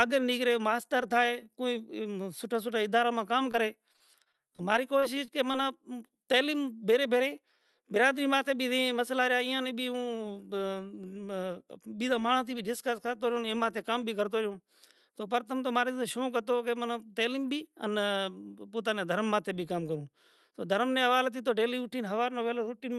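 At 3.51 to 3.55 s there is a brief smear in the speech, a tiny wobble where the sound seems to hang for a moment before carrying on. This is short concealed packet loss. About 20 ms of audio did not arrive in time, and the receiver filled the gap by extending the preceding sound and then blending back into the real signal. The patch is short enough to sound like a slight blur.

From 3.93 to 5.55 s the speech turns choppy and robotic, with a stuttering quality and small pieces missing. This is repeated packet loss. There are 11 separate dropouts, the longest around 35 ms. Each time, the decoder invents a continuation of the last sound, then real audio resumes until the next loss soon after. Together, about 12 percent of that stretch is concealment, which produces the mechanical texture.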